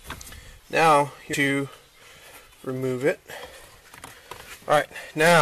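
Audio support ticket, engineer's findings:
Damaged data in a compressed stream, 1.33 s. Brief chirp, squawk, click or short hole, under 20 ms, in the audio. Probable component: decoder input, the compressed file or stream itself. Mechanism: corrupted bytes in one region make the decoder misread or reject those frames, lose sync and hunt for the next valid frame header before playback resumes. Single event.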